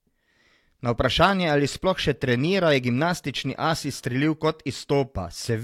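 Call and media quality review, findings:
No audible technical faults in the speech signal: no dropouts, distortion, timing breaks or level anomalies that would point to a failing component in the capture or transport chain.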